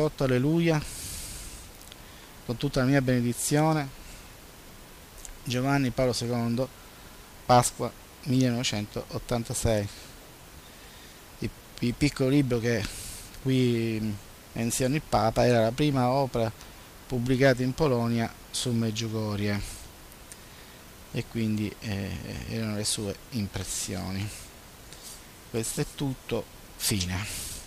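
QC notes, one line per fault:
No faults found in this clip. Nothing in the audio calls for a QC entry.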